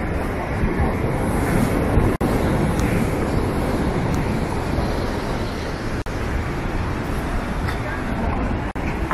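From 1.35 s to 5.44 s a doubled audio track runs under the sound: a second, full-band copy trails the original by about a second and a half and sits roughly 5 dB lower. It switches on and off abruptly at those edges and carries no decay or room colour, which separates it from an echo or reverb tail. The likely cause is the same audio being captured twice, once through a slower path.

Within that stretch, at 2.16 s, a gap at a join of encoded pieces opens for 49 ms, and the same fault returns at 6.02 s for 45 ms and at 8.71 s for 44 ms. Each is a short silence cut into continuous sound, with edges smeared by the codec. The sound then resumes exactly where it stopped. That continuity is what sets these apart from dropouts, where material goes missing: here encoder start delay and end-of-piece padding were left in at each join, so silence is inserted rather than anything removed.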